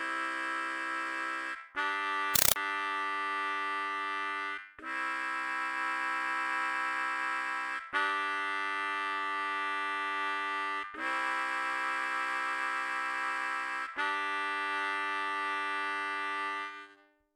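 Compressed stream played as audio, from 2.36 to 2.56 s in this recording of everyday sounds: a Dolby Digital (AC-3) bitstream, which fits 256 kbps, is reproduced as raw samples rather than decoded, giving loud static bursts of 5.33 ms repeating at 31.25 Hz.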